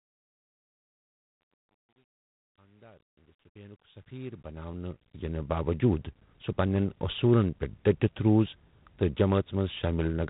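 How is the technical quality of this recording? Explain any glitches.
The recording has one problem that runs from start to finish: G.726 ADPCM coding damage, plainly audible throughout. The speech carries a harsh, rasping hiss that rises and falls with its level. Nothing above 4 kHz gets through. This coder sends only a few bits per sample, each describing the difference from an adaptive prediction. Those coarse steps add the grainy noise, and its roughness fits 24 kbit/s. The gentle fade-in over roughly the first 5.69 s is smooth, with no click.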